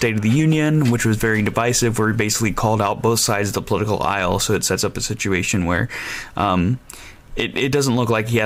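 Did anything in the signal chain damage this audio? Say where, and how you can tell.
No, nothing along the chain seems to have harmed this one, so there's no stage to point at and no moment worth flagging.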